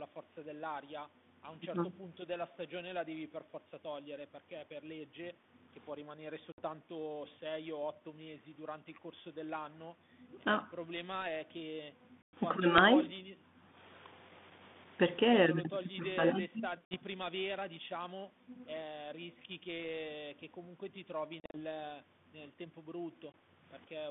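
Speech over a G.726 ADPCM line loses packets at 6.52, 12.22, 16.85, 21.4 and 23.32 s. Each packet loss on an ADPCM call leaves hard-edged silent holes and desyncs the decoder's predictor, so speech returns briefly with slight distortion.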